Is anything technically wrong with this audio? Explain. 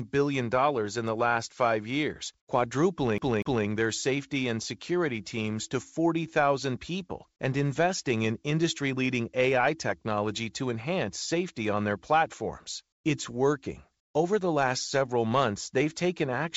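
Yes, there are two faults in this speech recording.

From 3.18 to 3.67 s, a slice of about 0.24 s of audio repeats twice in quick succession, with a tiny mute at each jump. The result is a fast, mechanical stutter. This is the sound of a CD stuck on one turn: a scratch knocks the laser back one track at the same point on each revolution, so the same fragment loops until it breaks free.

From 12.92 to 13.04 s, for about 120 ms, the natural background gives way to a smooth, featureless hiss about 17 dB quieter than the room sound around it. That background already sits about 57 dB below the loudest passages. The likely cause is comfort noise in place of the background: the sender stops transmitting during a pause it takes for silence, and the receiver fills the gap with synthetic noise that only roughly matches the real ambience. The call path's codec also leaves nothing above 8 kHz.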